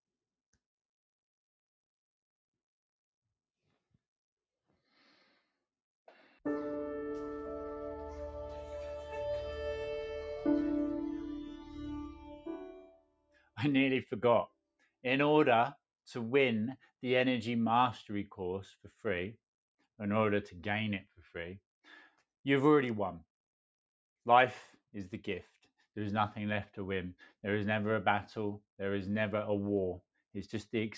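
The sound dips three times: from 12.15 to 12.47 s by about 11 dB, then 12.72 to 13.58 s and 14.47 to 14.87 s by about 22 dB each. This is sound cut by the noise suppressor, which misread it as noise and pulled it down.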